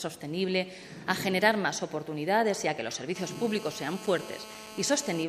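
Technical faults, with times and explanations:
3.16 to 5.24 s, GSM phone buzz: a hard, raspy buzz at about 217 Hz, roughly 15 dB below the sound, rich in harmonics and holding steady as during a call, because the audio circuit rectifies the radio bursts of a nearby 2G handset. Its pitch and rasp set it apart from smoother 50 or 60 Hz mains hum.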